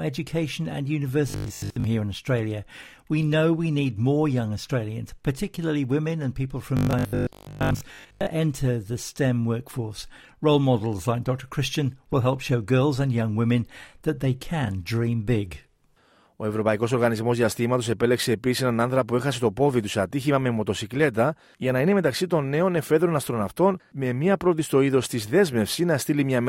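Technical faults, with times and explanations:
1.30–1.86 s and 6.77–8.31 s, robotic sound from repeated short buffers: most of the audio is replaced by repeats of 20 ms chunks, likely from late buffers. This produces a rigid 50 Hz buzz, seen as evenly spaced vertical striations and harmonics on a spectrogram.
12.13–12.15 s, loud pop: a single sharp spike stands a few dB above the speech on the waveform and shows as a broadband vertical line on a spectrogram. It is likely a voltage glitch.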